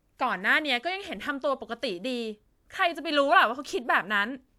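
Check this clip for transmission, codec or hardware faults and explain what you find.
No transmission, codec or hardware fault can be heard anywhere in the speech, and the signal holds steady and continuous throughout.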